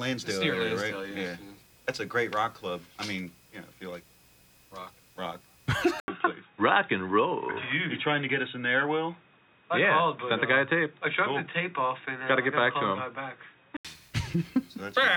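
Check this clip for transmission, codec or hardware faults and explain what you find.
One fault stands out. From 6.0 to 13.85 s, after an 80 ms silence, the sound turns boxy, with nothing above 3.8 kHz, at much the same level. This is likely an input switched to a poorer device, whose narrower band and faint new noise floor, rather than a simple low-pass filter, set it apart.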